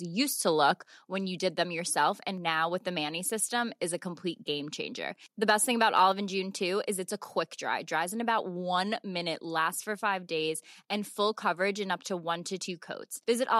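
Speech, with a brief microphone overload from 5.49 to 5.52 s, where the loudest peaks exceed the converter's ceiling by about 2 dB and have their tops flattened. A small fraction of samples is affected, giving a short, harsh crackle, likely caused by input gain set too high.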